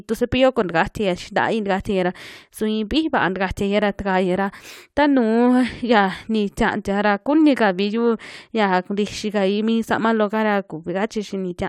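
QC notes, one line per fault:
No faults were found in this speech recording. Nothing in it calls for a timed entry.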